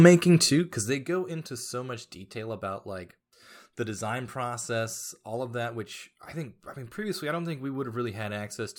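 From 0.44 to 1.18 s, zipper noise ticks through the speech. Unsmoothed 1 dB steps, some twenty a second, drop the level about 15 dB.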